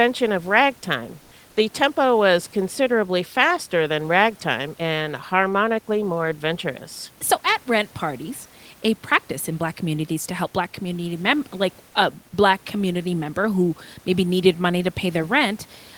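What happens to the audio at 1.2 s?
Comfort noise replaces the background from 1.21 to 1.31 s, just after "of ragtime", likely from discontinuous transmission: the pause is filled with steady, featureless synthetic noise, shifted about 1 dB in level.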